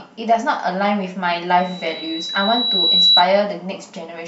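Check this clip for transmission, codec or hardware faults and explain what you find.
There is one hardware fault: loudspeaker feedback squeal, from 1.58 s to 3.27 s. A microphone picks up its own loudspeaker, and the loop gain passes one at 3.9 kHz. That tone grows over about one and a half seconds. It ends roughly 10 dB above the speech.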